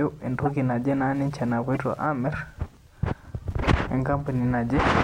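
Underneath the whole clip there's faint Wi-Fi interference: a steady tick about ten times a second, matching a 102.4 ms beacon that a nearby radio pushes into the circuit. Corrupt frame decoded shows up at 0.45–0.48 s, 1.75–1.77 s and 3.63–3.66 s: damaged compressed frames got played anyway, giving short chirpy blips, loudest at the first.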